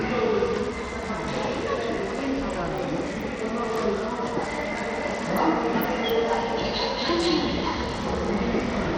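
Bluetooth SBC compression runs throughout the clip and is the likely cause of plainly audible codec damage. Starved upper sub-bands leave the treble flickering and gritty, with nothing above 18.7 kHz. Coarse quantisation adds grain, which fits a bitrate near 80 kbps.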